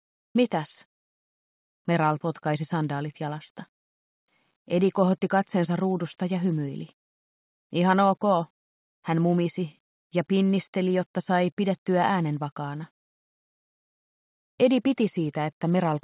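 From 0 to 0.35 s the sender was likely in discontinuous transmission and the receiver played comfort noise in place of the background, replacing its detail with steady, featureless hiss about 5 dB off the real level, which sits about 72 dB below the loudest sound, band-limited below 4 kHz.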